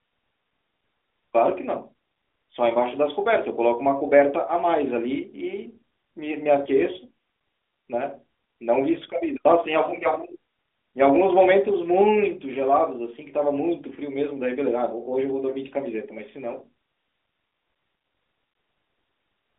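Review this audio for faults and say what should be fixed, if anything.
A brief dip or warble in the speech at 6.64 to 6.68 s is a lost AMR speech frame: one 20 ms frame failed its checksum, so the decoder repeated the previous frame's pitch and vocal-tract settings at reduced gain over the narrowband 12.2 kbps signal. Stronger channel error protection, or retransmission where latency allows, would keep such frames from being dropped.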